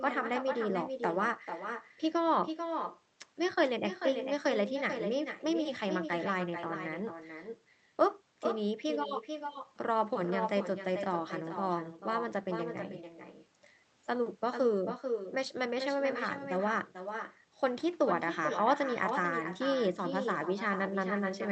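From start to end, the speech carries echo with no canceller. A far loudspeaker feeds the microphone, returning a thinner copy around 400 ms later, about 7 dB quieter.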